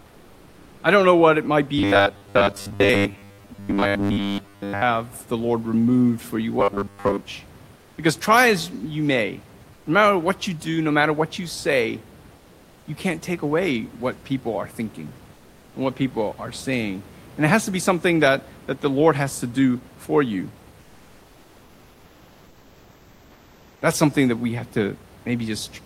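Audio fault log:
0.00–0.83 s, 7.75–7.97 s, 9.73–9.85 s (between "try as you may" and "no matter what you"), 12.37–12.87 s, 15.33–15.73 s (between "what people are thinking" and "and what people are"), 20.81–23.81 s (after "to do for you"): comfort noise in place of the background. In each pause the room noise, which elsewhere sits about 28 dB under the speech, turns into a smooth, featureless hiss about 2 to 4 dB quieter. The sender has likely stopped transmitting during silence under Opus-style discontinuous transmission, so the receiver fills the gap with synthetic noise.
1.78–4.83 s and 6.60–7.21 s: robotic sound from repeated short buffers. Here the speech becomes a rigid, metallic buzz pitched at 100 Hz that still roughly tracks the words. A repeat rate of 100 Hz means a 10 ms block is being replayed over and over. Roughly 70 percent of the audio in these spans is repetition rather than new signal, likely because fresh audio arrives too seldom and the playback side loops the last buffer to fill the time.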